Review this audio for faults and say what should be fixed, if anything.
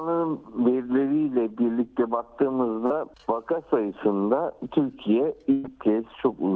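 At 2.86 to 2.92 s there is a brief smear, a short wobble where the sound seems to hang on itself for a moment before picking up again. This is short concealed packet loss: about 40 ms of the call arrived too late for the decoder, so the receiver bridged the gap by extending the preceding sound and then crossfading back into the real audio. Anything short that fell inside that hole is gone. Give the jitter buffer a little more headroom, or add forward error correction, so isolated late packets can be recovered instead of invented.

From 5.52 to 5.66 s the sound turns into a held, flattening tail that fades. The audio then resumes further along, with a chunk skipped. This is a burst of packet loss: roughly 120 ms of consecutive audio never made it through the network, and the receiver filled all of it by stretching the last sound while turning it down, with no silence left in the gap. What was in that stretch is lost. 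Reduce burst loss on the link itself, or use redundancy spread across packets, so a run of drops doesn't take out a whole syllable-length stretch.

Both faults sit on top of the G.722 coding at 64 kbps. The codec's limit is audible as nothing above 8 kHz.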